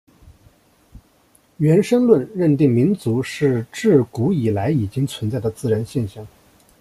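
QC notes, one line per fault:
Nothing to flag here; I listened through the whole speech recording and didn't hear a single problem worth noting.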